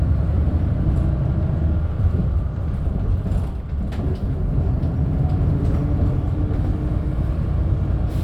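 No technical faults are audible.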